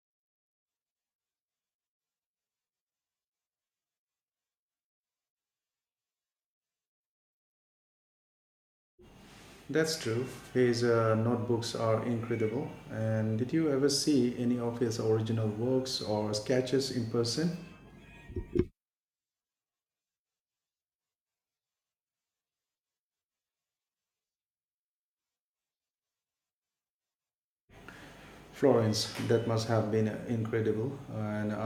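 Nothing in this recording stands out as a technical fault, so there's nothing to point to anywhere along its run.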